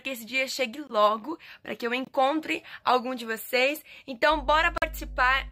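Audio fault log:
0.87–0.90 s, 2.05–2.09 s, 4.78–4.84 s: corrupt frame muted. Damaged compressed frames were rejected and replaced by silence, giving abrupt 30, 40 and 60 ms holes. The lengths fit one, one and two frames.
4.29–5.52 s: mains hum. A steady 50 Hz tone with low harmonics sits about 10 dB below the signal until the end, which points to ground-loop or transformer pickup.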